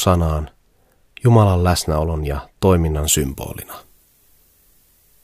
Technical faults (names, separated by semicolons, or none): pre-emphasis left on